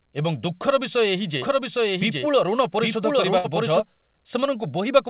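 A doubled audio track runs from 1.42 to 3.80 s. A second, full-band copy sits roughly 0.7 s behind at about the same level, likely captured again through a slower path, and it starts and stops abruptly. A burst of packet loss follows at 3.38 to 3.46 s. The receiver stretches the last sound for about 60 ms while fading it, then jumps ahead past a similar stretch of missing audio. All of this arrives through a call path whose sound stops at 4 kHz, which fits G.711 A-law at 64 kbps.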